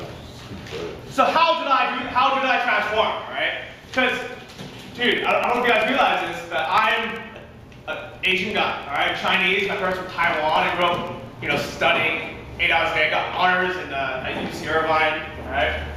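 From about 3.71 s to 11.58 s there's a steady run of periodic USB or driver dropouts. Something keeps stalling the audio path every 64 ms, roughly fifteen times a second, and each stall punches a gap of around a millisecond into the signal, filled with silence. You hear it as a fast, even ticking riding on the sound, only audible where there's signal for the gaps to cut into.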